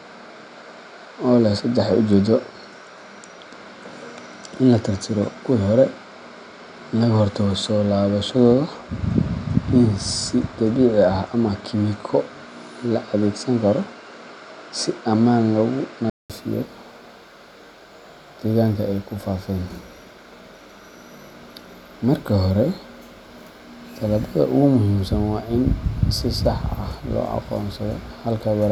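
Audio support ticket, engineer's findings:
Speech band-limited from 0.0 s to 16.3 s, nothing above 9.7 kHz, dull tone. 200 ms silence at 16.3 s, then full bandwidth returns. Level unchanged. Noise floor about 50 dB down. Likely cause: input switched to a poorer device, then back.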